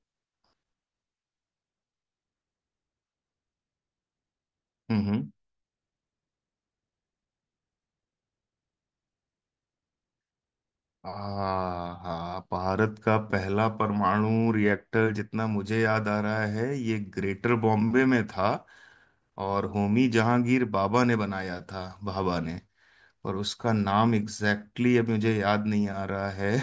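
No technical faults are audible.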